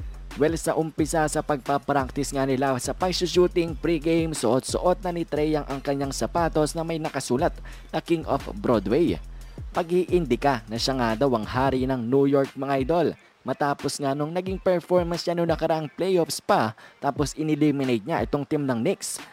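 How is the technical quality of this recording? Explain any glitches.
There's one problem, and it runs the whole clip: sample clock jitter. The converter's timing wobbles by a few microseconds, so fast-moving, loud passages pick up a faint hiss or roughness, fading away in quiet moments.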